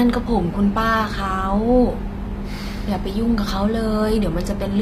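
From start to finish the treble of this speech sounds synthetic: s sounds come out gritty and lisping, and nothing is present above about 15.5 kHz. The likely cause is HE-AAC compression at a low bitrate. It rebuilds the upper band by copying lower bands upward, so the harmonics there no longer match the real ones.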